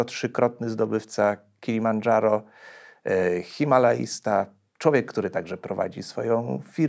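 The speech carries no technical faults; it has the ordinary sound of call microphone processing, with nothing above 8 kHz and the lowest bass taken out by the usual high-pass filter.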